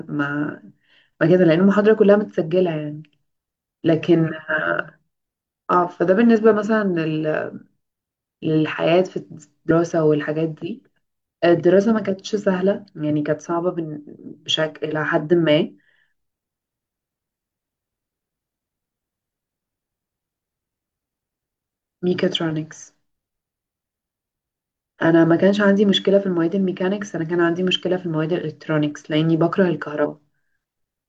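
Compressed frames skipped at 9.66 to 9.72 s and 30.00 to 30.06 s: about two 46.4 ms frames went unplayed, so speech jumps roughly a tenth of a second.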